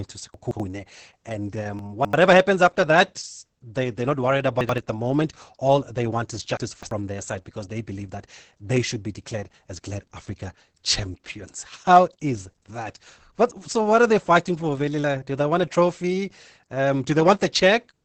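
The whole speech clip carries heavy Opus voice compression, sounding like about 10 kbps SILK: nothing above 8.6 kHz, with a muffled, hoarse, slightly robotic edge. Chunks out of order jumble the sound at 0.34 to 0.60 s, before "happens after that they" at 1.79 to 2.13 s, between "they they're not worried" and "at the moment" at 4.61 to 4.78 s, and between "they want is" and "their side because they" at 6.57 to 6.91 s. Each time an 85 ms chunk plays one to three chunks late, giving a garbled moment with hard joins.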